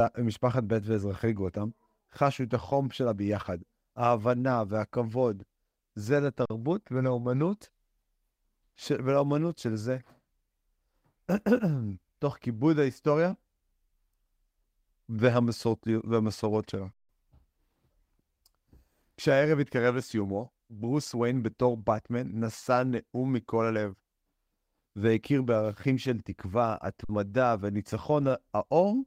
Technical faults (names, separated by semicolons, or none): lost packet rebuilt from error correction; underrun with held sample